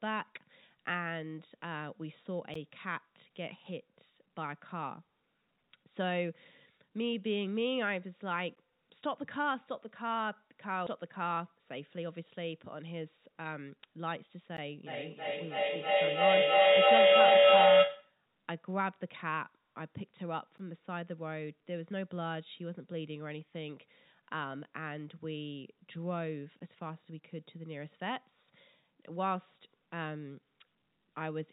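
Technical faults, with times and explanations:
2.54, 8.55, 14.57, 20.58 and 26.59 s, gap between chunks: Each is a tiny hard-edged dropout of about 13 ms that drops briefly into silence and straight back, recurring every 6 s like clockwork. That regular spacing means the audio was handled in 6-second chunks and each join left a short stretch of silence, likely from padding or a late start of the next chunk. Nothing is lost, but the flow breaks at every join.
10.87 s, skip ahead: The speech lurches forward with no audible gap, as though a fraction of a second had been snipped out and the two sides spliced together. Roughly 0.4 s of audio is missing. This happens when audio that has piled up in the jitter buffer is discarded to catch up, so playback jumps straight to the newer material and the timing tightens by about the same amount.
14.87 to 18.20 s, feedback howl: A tone near 500 Hz swells over the speech, peaking about 14 dB above it, with the loop repeating roughly every 0.3 s until it stops. 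Within the narrow call band, which has nothing above 4 kHz, it stands out sharply. A microphone is picking up a loudspeaker carrying the same call, and each trip around that loop adds level. The repeats build on themselves and narrow to the pitch the loop favours.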